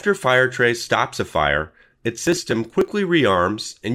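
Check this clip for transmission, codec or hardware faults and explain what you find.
One fault: processor overload crackle from 2.27 to 2.88 s. The processor repeatedly missed its deadlines for small buffers, around 5 ms each, and skipped them, which points to roughly fifteen dropouts. Those hard-edged gaps produce gritty crackle over the speech until the load eases.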